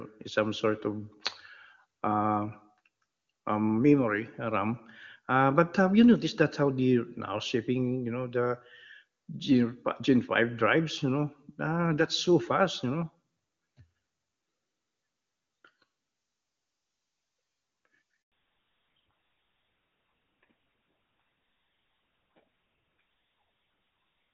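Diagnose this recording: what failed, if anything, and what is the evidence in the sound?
At 18.22 s the speech stops abruptly and there is dead silence for 100 ms, until 18.32 s, with nothing spoken carried across. This is a handover gap at the network stage. While the call was being passed from one network to another, no speech frames reached the decoder. The sound decays almost at once and stays silent until the new link begins delivering audio, so whatever was said in that tenth of a second is simply missing.

From 18.32 s to the end, the speech is duller and rougher. The crisp upper range heard before the break is gone, with nothing above 4 kHz. This is a fallback to narrowband at the codec stage. Before the switch, the HD Voice wideband codec sounds clean, with faint or no coding damage, which fits AMR-WB at about 23.85 kbit/s. After it, the character points to GSM full rate at 13 kbit/s, which band-limits and coarsens the voice.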